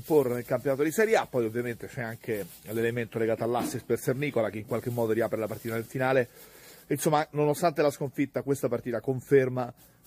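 No technical faults can be heard anywhere in this audio. Nothing in it needs a time mark or a note of trouble.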